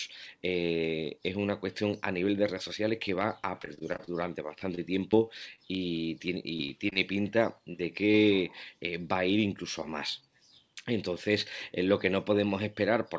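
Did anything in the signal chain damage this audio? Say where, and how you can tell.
Yes. The damage happened in the network and receive-side call processing of a call path whose spectrum stops at 8 kHz. Three kinds of fault are audible.

Repeated packet loss (robotic sound) occurs at 3.62–5.60 s and again at 6.58–6.98 s. The first stretch has twelve gaps, the longest 30 ms. The second has four, the longest 21 ms. The concealment keeps looping the last sound into each hole, giving choppy sound with pieces missing. On a spectrogram this shows as repeated short smeared stripes. On a waveform it shows as copied periodic chunks.

Short concealed packet loss occurs at 7.72–7.76 s and 8.12–8.16 s, each hole about 20 ms. The receiver extended the preceding sound to bridge each missing packet, then crossfaded back. Each one is heard as a brief smear or wobble. On a spectrogram it is a short blurred patch. 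On a waveform it is a repeated cycle.

A jitter buffer speed-up runs from 10.21 to 10.63 s. There the sound plays at 107% speed with unchanged pitch, because the buffer had too much audio queued and dropped pitch-period slices, about 40 ms in total. The waveform shows whole cycles removed at the splice points. Harmonics on the spectrogram stay at the same height while events arrive sooner.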